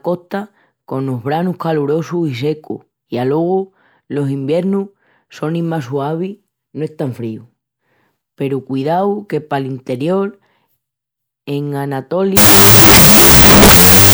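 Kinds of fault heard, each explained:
Wrong sample width: from 12.37 s to the end, the speech turns into loud, harsh noise with the original buried underneath. Audio stored as 16-bit integers is being read as unsigned 8-bit, so each sample is split into two separate values. Only the high bytes carry the top bits of the real signal, and the low bytes come out as noise. Doubling the sample count also plays the sound at half speed, an octave lower.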